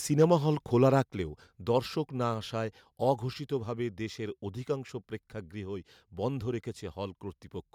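From 0.2 to 0.33 s the loudest peaks are flattened and crackle harshly. This is likely microphone overload, driving the converter about 2 dB past its limit. At 1.02 s the speech and background drop suddenly by about 5 dB, and again at 2.34 s by about 2 dB. The likely cause is the microphone volume being stepped down by the call software.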